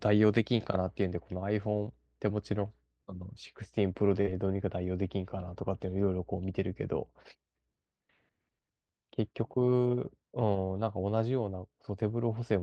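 At 4.21 s the speech briefly turns into a held, fading buzz or hiss before jumping ahead: a burst of packet loss, concealed for about 48 ms with roughly 40 ms skipped. From 4.26 to 4.28 s the sound comes back rough and noisy, a lost packet rebuilt from error correction, its 20 ms decoded from Opus's low-bitrate backup copy.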